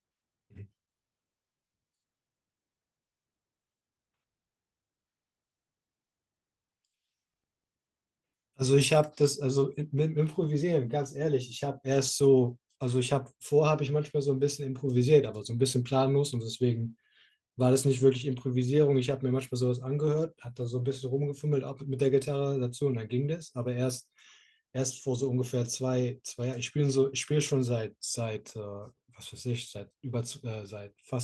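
No technical faults are audible in this speech.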